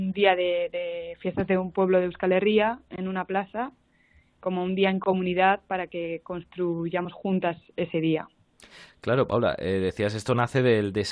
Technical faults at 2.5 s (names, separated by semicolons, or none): none